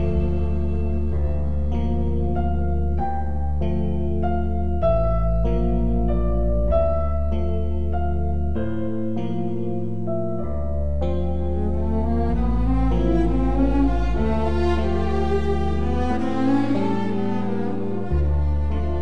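No technical faults are audible.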